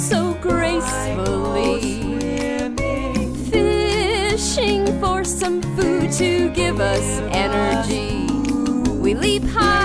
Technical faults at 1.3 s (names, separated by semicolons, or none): none